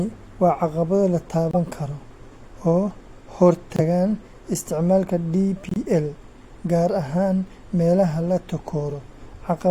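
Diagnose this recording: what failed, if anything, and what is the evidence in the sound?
Codec: corrupt frames muted by the decoder leave abrupt silent holes after "waa caqabado la" at 1.51–1.57 s, then 3.76–3.80 s and 5.69–5.77 s, with timing kept.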